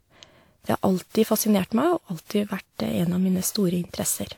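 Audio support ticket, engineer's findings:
Generation loss, throughout the speech. Swirly, hollow, smeared texture, soft consonant attacks, more degraded than 128 kbit/s should sound. Likely repeated WMA re-encoding, about seven passes, each requantising on a shifted frame grid so noise and spectral holes accumulate. Bandwidth still reaches 20 kHz.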